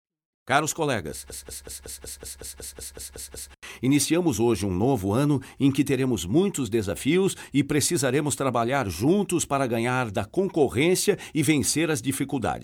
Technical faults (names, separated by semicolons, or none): system hang loop